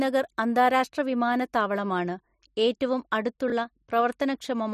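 At 3.48 to 3.52 s the speech briefly jumbles. These are chunks out of order: one 20 ms chunk arrived a chunk late and played after the piece that should follow it, leaving three hard joins.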